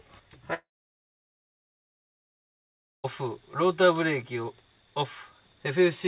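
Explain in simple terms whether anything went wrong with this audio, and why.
At 0.54 s the sound suddenly turns into a short buzzy tail that fades away, and then there is near silence until 3.06 s, when the audio picks up again further along. About two and a half seconds are simply gone. The likely cause is a long network dropout: no audio reached the receiver for that stretch, so it briefly stretched out the last bit of sound, then fell silent and skipped the lost part. The call line itself sounds muffled because nothing above 4 kHz gets through.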